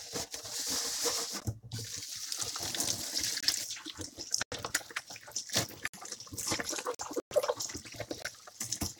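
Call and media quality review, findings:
Block of digital silence at 1.40 s (14 ms), 3.40–3.43, 4.43–4.52, 5.88–5.94, 6.95–6.99 and 8.22–8.25 s. Hard cuts to silence. Lengths at 3.40, 4.43, 6.95 and 8.22 s fit unfilled 1024-, 4096-, 2048- and 1024-sample output buffers.

Hole at 7.20–7.35 s. Sound resumes further on, as if it played through. Likely a Bluetooth dropout from late packets.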